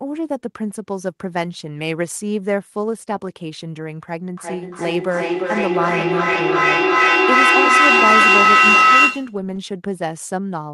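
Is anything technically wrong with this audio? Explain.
Yes, there is a feedback howl from 4.37 to 9.44 s. A microphone and loudspeaker are feeding each other, most likely two devices in the same room, and each trip round that loop adds level instead of losing it. The sound narrows to a piercing tone around 1.5 kHz that swells to about 9 dB above the speech, with the loop's delay at roughly 0.4 s, and it holds until the loop is broken.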